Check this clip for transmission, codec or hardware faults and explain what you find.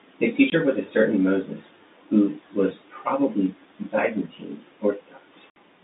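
The speech drops out twice, in short dead holes with hard edges. This is packet loss filled with silence. At 0.50 to 0.52 s a 20 ms slice vanishes, and at 5.51 to 5.56 s a gap of about 60 ms opens. The receiver played silence where packets never arrived. The lengths fit 20 ms packets, one and then three in a row, and the abrupt cut to and from zero gives each hole hard edges. The narrow telephone band, roughly 250 Hz to 3.7 kHz, comes from the G.711 coding on the line.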